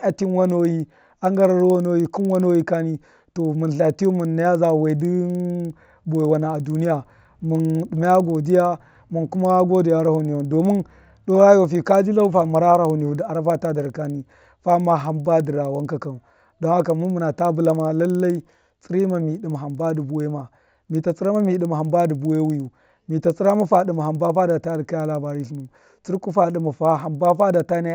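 Resampler restarted on every block, throughout: each 50 ms block is converted in isolation, so edge errors produce a 20 Hz ticking buzz underneath the speech.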